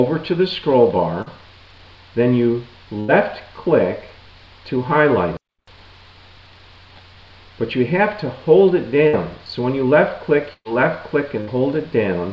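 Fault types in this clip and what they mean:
short concealed packet loss: Brief smears or wobbles near 1.22 s and 5.56 s, where the sound is carried on for a moment rather than cut. About 40 ms and 20 ms of audio arrived too late, and the receiver bridged each gap by extending the preceding sound.
burst of packet loss: At 3.00, 9.08, 10.53 and 11.41 s the sound holds as a buzz or hiss that fades, then resumes further on. Runs of 60 to 120 ms were lost. The longest, at 10.53 s, fades fully to about 40 ms of silence.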